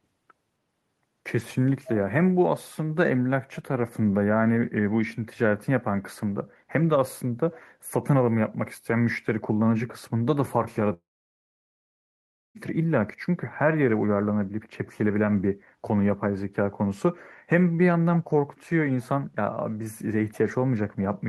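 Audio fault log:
10.93–12.58 s, long network dropout: sound trails into a brief fading buzz, then 1.5 s of silence, and returns with a stretch missing, likely from packets lost in transit.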